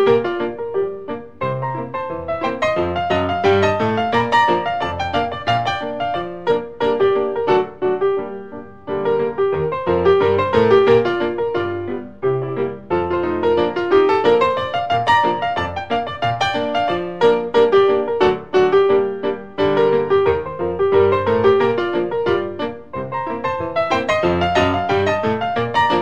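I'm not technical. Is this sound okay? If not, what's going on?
No. Sample clock jitter runs throughout: the recording clock wobbles slightly, so samples land early or late, adding a faint hiss that grows on loud, bright moments.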